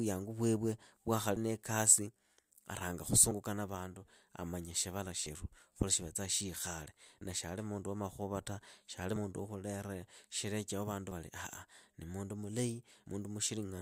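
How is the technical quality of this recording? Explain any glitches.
The recording has one recurring glitch: audio missing between chunks. Short skips occur at 1.36, 3.31, 5.26, 7.21, 9.16, 11.11 and 13.06 s, roughly every 2 s. The one at 1.36 s comes just before "niikasi aranga", the one at 3.31 s between "niikasi aranga" and "na vandu amanya shivala", and the one at 7.21 s right after "khuli shikhale". Each drops about 50 ms. The likely cause is a recorder working in 2-second blocks and losing audio at each handover. The edges then butt together, so the speech jumps forward abruptly.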